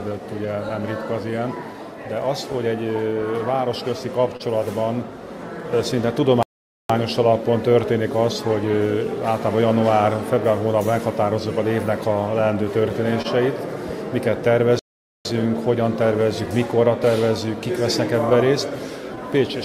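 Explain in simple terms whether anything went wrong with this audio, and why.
Small timing hiccups run through the whole clip. This is clock drift between sender and receiver: the sending device's clock runs roughly 2% slower than the receiving one, so the two never stay quite in step.

To cope, the receiver makes repeated timing corrections from about 0.09 s to the end at 19.65 s, so the audio plays at about 98% speed. It keeps nudging the timing in the same direction at uneven intervals.

There are also brief ticks and smears, a few between 0.69 s and 4.43 s and about five more between 12.89 s and 19.19 s. These are scattered short gaps, where bits of data arrived late or went missing. Each hole, at most about 30 ms, was patched by stretching the sound just before it.

Twice the sound stops dead for almost half a second, from 6.43 s to 6.90 s and from 14.79 s to 15.25 s. These are playback stalls. 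The player likely ran out of incoming data and fell silent until more arrived.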